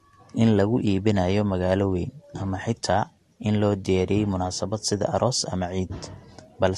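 All the way through, the speech stops dead above 12.2 kHz and carries mixed, layered codec smearing, likely transcoding between lossy codecs, consistent with an AAC-to-Vorbis chain.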